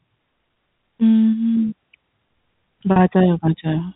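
At 2.92 s the speech briefly catches on a slightly held, buzzy tone that lasts until about 2.96 s before the voice carries on. This is packet loss with pitch repetition. About 40 ms of audio went missing, which fits two 20 ms packets, and the receiver filled the gap by repeating the last pitch period. The short loop sounds like a frozen fragment of voice. All of this sits within the 4 kHz telephone band of the G.711 coding.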